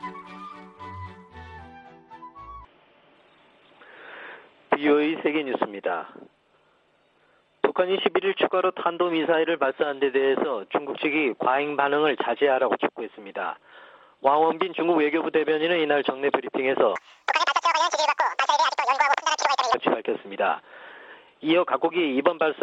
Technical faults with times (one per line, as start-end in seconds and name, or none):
16.96-19.74 wrong sample rate